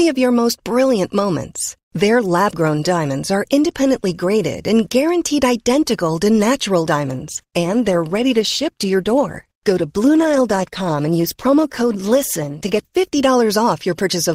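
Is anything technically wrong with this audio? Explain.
Yes. From 7.07 to 13.07 s, right after "identical to natural", the adaptive stream drops to a lower bitrate. The switch is abrupt but gapless. Codec artefacts rise, which fits a fall from about 64 to 16 kbit/s.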